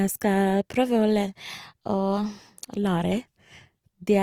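Throughout the speech, the likely cause is Opus compression running short of bits, with the encoder working in its CELT music mode. The full audio bandwidth is kept, and the amount of damage fits a rate of about 24 kbps. CELT holds on to each band's energy but fills starved bands with folded or noise-like content. The result is plainly audible: tonal parts turn rough, noisy and grainy, with less swirling than MP3 would give and no muffling.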